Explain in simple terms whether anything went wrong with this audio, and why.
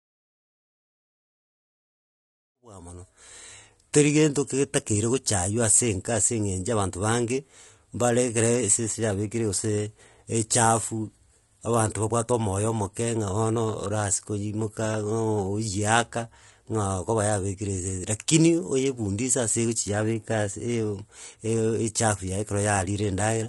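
The speech sounds rough and grainy from start to finish. There is a hiss sitting between the tones of the voice. The highest sounds seem dull or artificial. This is likely low-delay AAC compression, the kind used in video calls. It chops sound into very short slices to keep the delay low. Short slices capture the voice's pitch poorly and waste data. At a tight data budget, the detail is lost. The gentle fade-in, from about 2.5 s to 3.56 s, is a normal edit.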